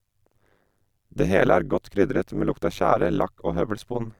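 A speech recording with overlap-add ripple running through its whole length. The level pumps up and down around a hundred times a second, once per processing frame. The swings are deep, about 60 dB from peak to trough. The result is a metallic buzz with extra tones around the speech. It comes from resynthesis that rebuilt the audio from windowed frames whose overlapping windows did not add up to a steady gain.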